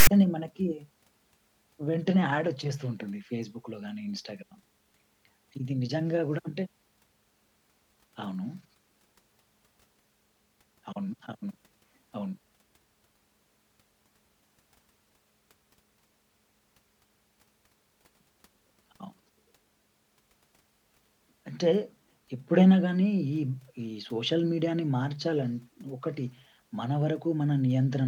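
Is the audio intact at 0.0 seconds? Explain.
No, the clip opens with file tags played as audio, running from 0.0 to about 0.07 s. A block of text metadata is being read as if it were samples, so you get a short, hard-edged rasp, loud and lopsided toward one side, before the speech starts.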